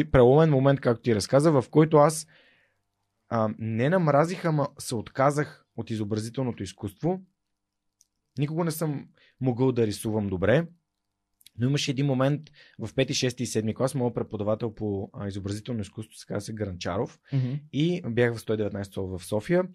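At 10.52 s the speech is interrupted by a single corrupt frame decoded: bits inside one compressed frame were damaged, yet the decoder played it anyway, so misread gains and codes put energy at frequencies that do not belong there. The result is a brief blip, peaking at roughly -20 dBFS. On a spectrogram it shows as a thin vertical smear across unrelated bands; the waveform shows a short, abrupt disturbance unlike the surrounding signal.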